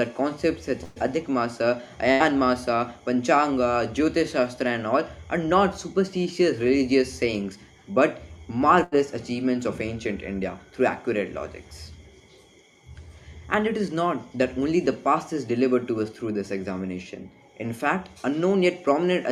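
Burst of packet loss at 0.83 to 0.99 s, 2.12 to 2.23 s and 8.84 to 8.95 s. Runs of packets never arrived in time, so the receiver stretched and faded the last sound across each gap, about 120 ms the first time and 80 ms after, before jumping ahead past the missing audio.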